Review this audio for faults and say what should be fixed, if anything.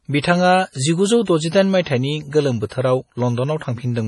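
The speech sounds watery and swirly throughout, with nothing above 11.2 kHz. This is likely heavy MP3 compression, consistent with a bitrate near 32 kbps. Encode at a higher bitrate, or keep an uncompressed master.

A short hiss comes just before sharp attacks at 1.25 to 1.27 s (25 ms) and 2.67 to 2.71 s (43 ms). This is pre-echo: block quantisation noise spreads into the quiet before each onset. A higher bitrate or an encoder with better block switching would prevent it.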